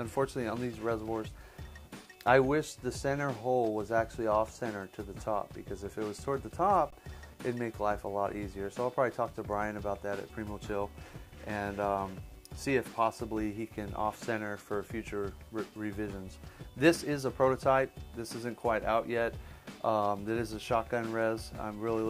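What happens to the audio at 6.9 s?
At 6.90 s the sound briefly freezes flat for about 20 ms, then resumes with only a soft edge. This is an underrun with held sample: the output buffer ran dry, the converter held its last value, and playback continued where it stopped, losing nothing.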